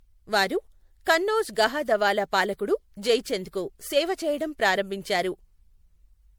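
Generation loss runs throughout this speech recording: the sound is swirly, smeared and hollow, with blurred attacks, though content still reaches 20.7 kHz. The likely cause is roughly four rounds of MP3 decoding and re-encoding, fitting 96 kbit/s, each pass adding fresh quantisation noise and spectral holes.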